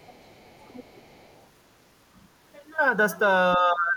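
Other side's voice leaking through, from 0.0 to 1.47 s: a second, far-end voice sits faintly under the talker, very low, roughly 30 dB beneath the speech. This is likely residual loudspeaker echo that the talker's echo canceller failed to subtract from the microphone signal, so traces of the remote party pass back down the line.

Speech suppressed in double talk, from 3.57 s to the end of the clip: over about the last 400 ms the talker's level sinks sharply, by something like 25 dB at its deepest. Both parties were likely speaking at once, and the echo canceller, unable to separate near-end speech from echo, attenuated everything together.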